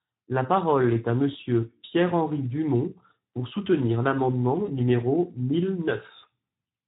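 Speex codec damage runs through the whole of this speech recording and is plainly audible. The CELP coder has too few bits to describe the excitation, so the voice comes out noisy and hoarse instead of clean. The degree of damage fits a low-to-middle setting of around 11 kbps. VoIP packet loss concealed by the speech codec appears at 4.65 to 4.70 s. The gap points to a single lost 20 ms frame. The decoder filled it by extrapolating from the last pitch and spectral envelope with falling gain, so the voice smears into a brief, fading buzz or coloured noise. Because each frame depends on the one before, the voice stays weakened or distorted for a short time after normal packets resume, which stretches the disturbance to about 50 ms.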